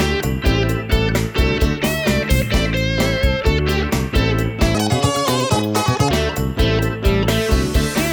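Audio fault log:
4.75–6.11 s, section at the wrong speed: For about 1.4 seconds the sound runs at 1.92 times its proper rate. Pitch and tempo rise together, so everything turns high and hurried. The shift is roughly ten semitones, close to an octave. It starts and stops abruptly at the section's edges. The likely cause is an editor or player handling this stretch against the wrong clock, nearly doubling its playback speed.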